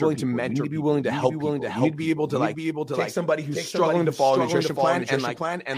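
Throughout the speech, a doubled audio track: a dry, full-band copy trails about half a second behind, roughly 5 dB down, likely from a second, slower capture path.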